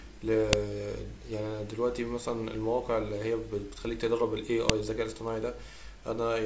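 At 0.53 s and again at 4.69 s the speech is broken by a sharp, loud click: a file header played as audio. Each marks a join where a WAV piece kept its header, so those bytes were decoded as samples.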